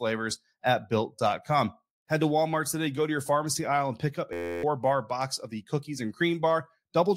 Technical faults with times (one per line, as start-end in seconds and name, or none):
4.33-4.63 system hang loop